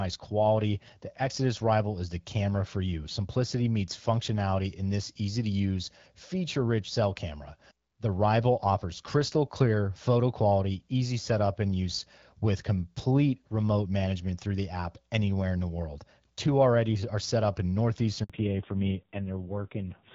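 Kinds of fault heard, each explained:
Handover gap: At 18.24 s the speech simply drops out for about 60 ms, fading within a few tens of milliseconds and then sitting in silence until 18.30 s. That's the call being passed from one network to another, with no speech frames getting through while the switch happens. Whatever was said in that short stretch is gone, not muffled or garbled, so you hear a clean hole in the sound.
Fallback to narrowband: Straight after the gap, from 18.30 s to the end, the call has dropped from HD Voice to an older narrowband codec. Nothing above 4 kHz survives, so the speech loses its airy top and turns duller and a bit rough. The harshness points to a low-rate narrowband mode, something like AMR-NB at 5.9 kbit/s, after a wideband stretch that sounds like AMR-WB around 12.65 kbit/s.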